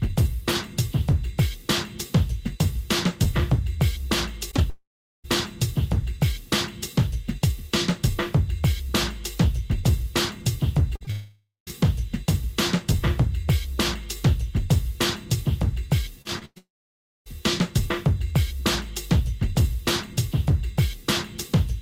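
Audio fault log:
4.51 s and 4.57 s, short concealed packet loss: about 20 ms of sound goes missing each time, briefly patched by extending what came before and then blended back in. This is heard as a quick smear or wobble. On a spectrogram it appears as a thin, slightly blurred vertical slice.
4.70–5.26 s, long network dropout: about 540 ms of sound is lost. A fading continuation of the last sound leads into about 380 ms of silence or faint steady noise, likely because audio stopped arriving. The waveform shows a decaying tail, then a flat gap.
10.96–11.72 s, repeated packet loss (robotic sound): five separate holes totalling about 80 ms, the longest 50 ms. About 12% of this stretch is patched, and each patch is followed soon by the next hole, so the sound turns choppy. The spectrogram shows repeated smeared stripes.
11.11–11.69 s, long network dropout: inside that choppy stretch, about 560 ms is lost outright. 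The concealment tail fades into about 160 ms of near-silence, likely from a break in delivery. In the waveform the envelope collapses to a low flat line before the sound resumes.
16.22–16.58 s, repeated packet loss (robotic sound): three holes totalling about 140 ms, the longest 106 ms, so nearly half the stretch is synthetic fill. This makes it sound choppy and broken. The spectrogram shows smeared, repeated blocks where detail should change.
16.58–17.28 s, long network dropout: about 680 ms never plays. A brief decaying buzz or hiss gives way to about 580 ms of silence, likely because packets stopped arriving for that long. The waveform goes flat, and the sound returns later with that section missing.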